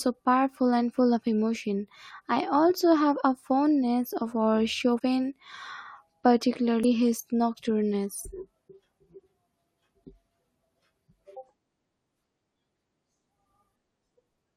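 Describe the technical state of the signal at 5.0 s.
Compressed frames skipped from 4.96 to 5.01 s, right after "a fondness of our": about 40 ms of the speech is never decoded, so the audio jumps ahead by whole frames.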